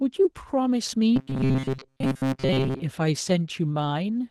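Opus voice compression runs through this speech clip: the coarse, slightly hoarse and muffled texture points to a low bitrate of around 16 kbps, with a linear-prediction core handling the lower band and a transform layer filling in above 8 kHz, so the codec damage is plainly audible throughout. Robotic sound from repeated short buffers takes over from 1.16 to 2.82 s, where the voice collapses into a rigid metallic buzz at 133 Hz. This is likely caused by audio arriving too seldom and a very short stretch of about 7.5 ms being replayed over and over, with most of the real sound in that span skipped.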